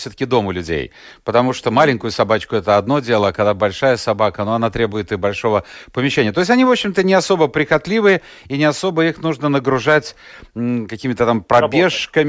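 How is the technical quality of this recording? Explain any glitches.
The recording shows no technical glitches, and the signal stays intact and continuous throughout.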